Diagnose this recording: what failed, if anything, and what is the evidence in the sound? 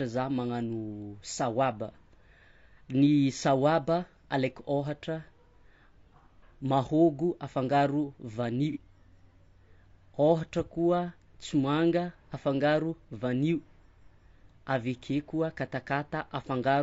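Low-delay AAC compression, throughout, at the codec stage: the speech is rough and grainy, with noise between harmonics, likely AAC-ELD at 32 kbps, whose short frames resolve pitch poorly.

AAC frame loss with concealment, 8.72 to 8.78 s, right after "mahôgo afangaro vanio": a smeared, noisy patch as the decoder refilled about 30 ms, fitting one lost frame, from the last good spectrum.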